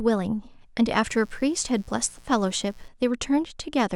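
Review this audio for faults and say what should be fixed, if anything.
A mains buzz runs under the speech from 1.08 s to 2.89 s, sitting well below the voice. Sharp switching spikes from a dimmer, rectifier or unshielded line arrive twice per 60 Hz cycle, spraying harmonics up into the kilohertz range. That spread of upper harmonics gives it a raspy edge, which separates it from plain hum, a smoother, low tone near 60 Hz. To prevent it, keep cables away from dimmers and power supplies and use properly shielded, grounded connections.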